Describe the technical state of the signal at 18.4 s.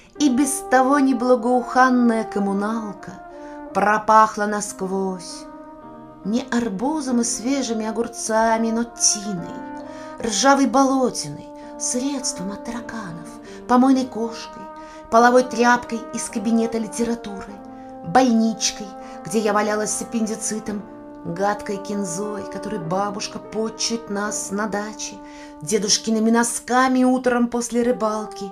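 At 18.4 s the signal is intact, with no dropout, distortion or other technical fault.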